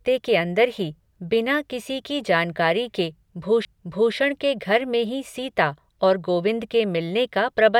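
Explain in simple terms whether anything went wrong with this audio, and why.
Something did go wrong, at about 3.65 s into the speech: a CD skip. The player got knocked, or hit a flaw on the disc, and its laser jumped to a different ring of the disc's spiral track. Playback drops out for just a couple of milliseconds, which you hear as a tiny tick, and then the speech picks up from a different spot instead of carrying on smoothly from where it was.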